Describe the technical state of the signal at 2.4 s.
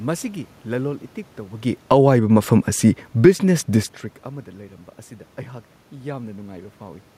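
At 2.4 s the automatic gain control is raising its gain. Having judged the input too quiet, it ramps up by about 8 dB between 2.01 and 2.67 s, so the speech and the room noise behind it swell louder together.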